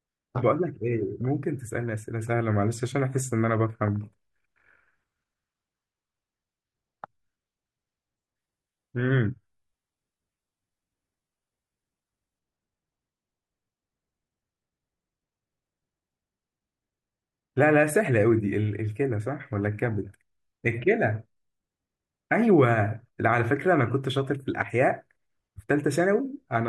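From 8.39 to 12.39 s the speech abruptly turns dull and swirly, which fits an adaptive stream at a lower bitrate, dropping to roughly 16 kbit/s HE-AAC with synthetic-sounding treble. Unlike a dropout, nothing goes silent; quality simply switches down, then back.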